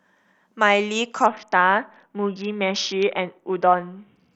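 From 1.26 s to 4.33 s the speech suffers a Bluetooth SBC bit pool drop. The link ran short of capacity, so the encoder cut the bits spent on each frame. The sound points to a fall from a bit pool near 28 to one near 6, about 60 kbps. The highest sub-bands get almost nothing. The rest are quantised coarsely. Treble goes dull and muffled. A gritty, grainy noise rides on the speech until the end of the fault.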